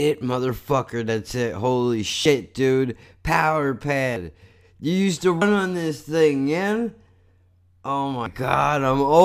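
Speech with compressed frames skipped at 2.25, 4.16, 5.41 and 8.26 s. About 70 ms of audio vanishes, or 150 ms at 5.41 s, which fits whole frames of about 26.1 ms being dropped.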